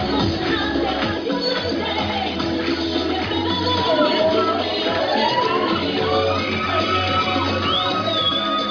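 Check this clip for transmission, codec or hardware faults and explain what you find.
The signal arrives intact, with no transmission, codec or hardware fault audible anywhere in the recording.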